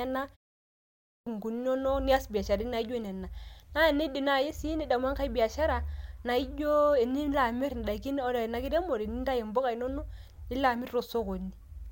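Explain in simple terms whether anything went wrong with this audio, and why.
Something did go wrong, near the start. After a short pause of about 0.43 seconds, the speech comes back at 0.71 seconds, but its opening is missing until 1.27 seconds. That is a clipped start after a pause. The playback device went idle during the quiet gap and needed time to wake up again. So about 0.56 seconds of speech was lost. The speech then begins abruptly, without its first sounds.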